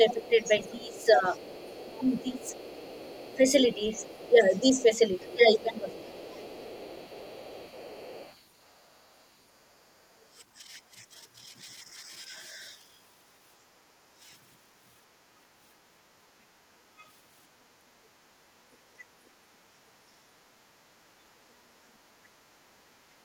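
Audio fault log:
0.00–2.55 s, 3.36–6.20 s and 21.04–21.34 s, speech suppressed in double talk: the speech sags and thins, roughly 15 dB down at first, around 10 dB in the second stretch and a sharp 25 dB or so dip near 21 s. This is likely an echo canceller ducking everything while both ends talked at once.
0.09–8.40 s, other side's voice leaking through: a faint second voice sits underneath, roughly 25 dB below the main speech. That's most likely far-end loudspeaker sound the echo canceller didn't fully strip from the mic.
13.62–14.21 s, 18.39–20.58 s and 21.54–21.89 s, background gated by the echo canceller: the room tone drops out, by about 14 dB, about 16 dB and about 13 dB, then comes back. The canceller clamped the mic hard while the loudspeaker played and released afterwards.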